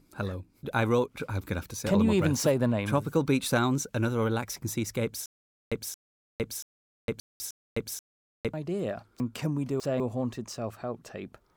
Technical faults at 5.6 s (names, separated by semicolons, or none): stutter with silent gaps